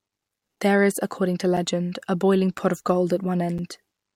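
Brief hard-edged dropouts of about 7 ms break the speech at 0.56, 1.57 (after "is according to"), 2.58 (after "a boiling") and 3.58 s (after "of gold"). This is a gap between chunks: the audio was handled in 1 s pieces, with silence inserted at each join.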